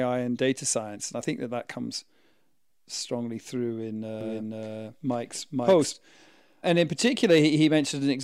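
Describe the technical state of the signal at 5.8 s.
A doubled audio track is present at 5.8 s, within 4.21 to 5.93 s, after "strongly through in". A dry, full-band second copy of the speech trails by about half a second at roughly equal level and stops abruptly, likely from a slower second capture path.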